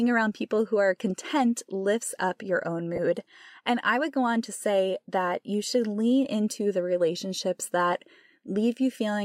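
At 2.96 to 2.99 s, right after "lifts up your own", there is a gap from lost LE Audio frames. The LC3 decoder filled about 20 ms, consistent with two 10 ms frames, by repeating the previous spectrum with random signs, leaving a brief noisy smear.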